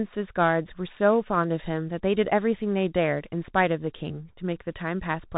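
Bluetooth CVSD headset codec damage runs throughout this speech: one-bit up/down coding at a rate fitting 64 kbit/s cuts everything above 4 kHz, roughens s sounds and leaves granular hiss.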